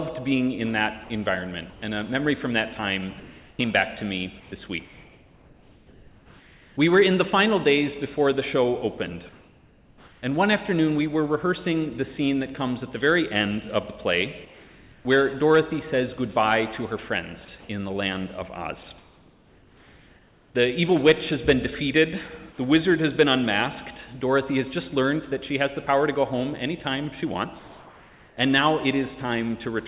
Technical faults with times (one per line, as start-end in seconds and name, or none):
1.04-1.10 sound dropped by the voice detector
1.04-1.82 comfort noise in place of the background
3.20-6.77 comfort noise in place of the background
9.29-10.22 comfort noise in place of the background
14.45-15.05 comfort noise in place of the background
17.60-20.54 comfort noise in place of the background
27.59-28.37 comfort noise in place of the background